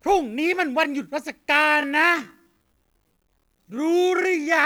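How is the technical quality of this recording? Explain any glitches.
The recording has one clear fault: a time-stretched section. From 1.60 s to the end, the speech suddenly slows to about 0.54 times its normal pace, yet the pitch does not drop. The likely cause is stretching software fitting the audio to a longer duration. To keep the pitch, it fills the extra time by repeating short slices of sound. The slowed speech drags.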